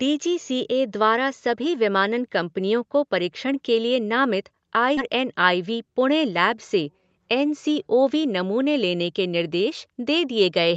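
A skip ahead at 4.97 to 4.99 s in this speech clip makes playback leap forward with no gap filled. Roughly a second of audio is gone, and the sounds on either side are butted together almost directly. A stretch was dropped, on the way or by the receiver's jitter buffer when it overflowed, while later audio was already queued, so the delay dropped by about that second at once. Right after, jitter buffer speed-up runs from 5.08 to 5.73 s. The speech plays at 109 percent speed with unchanged pitch and sounds hurried, because the buffer, still holding more than its target, removed around 70 ms in many short pitch-period pieces to catch up. Through the whole clip, nothing reaches above 8 kHz, which fits an Opus call path coded at about 32 kbps.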